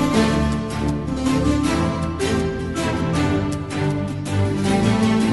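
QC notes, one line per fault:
No faults found in this clip. Nothing in the audio calls for a timed entry.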